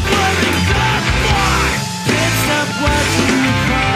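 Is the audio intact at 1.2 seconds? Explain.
Yes, the audio is intact at 1.2 seconds, with no dropout, click, distortion or other fault audible at that point.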